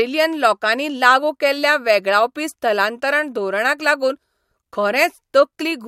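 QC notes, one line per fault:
0.17 to 5.84 s, clock slip clicks: a faint, steady ticking roughly every 70 ms that sits under the speech, about 70 single-sample jumps in all, likely from two unsynced clocks drifting apart by around 300 ppm and dropping or repeating a sample.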